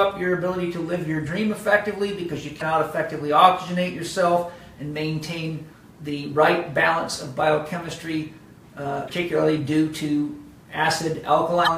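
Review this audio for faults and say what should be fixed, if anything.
Damaged data in a compressed stream at 2.58–2.62 s, 9.05–9.10 s and 11.64–11.68 s: corrupted bytes make the decoder misread frames and lose sync until the next frame header, giving short blips of about 44 ms each. Prevent it by checksumming transfers and re-fetching any corrupted segments.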